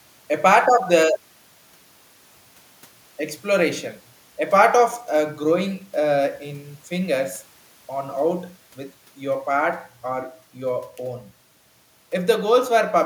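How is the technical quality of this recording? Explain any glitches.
Nothing in this recording stands out as a glitch, so there's no technical trouble to explain.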